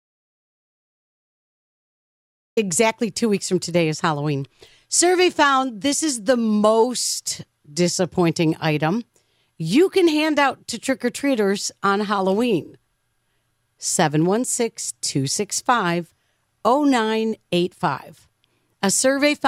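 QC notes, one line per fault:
0.00–2.57 s, audio dropout to silence: clip opens in silence with no room tone, speech entering mid-flow at "two weeks from today"; likely lost input while recording continued.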